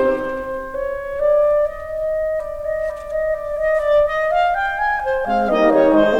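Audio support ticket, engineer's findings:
No faults found in the music clip on listening. No component in the chain flagged for follow-up.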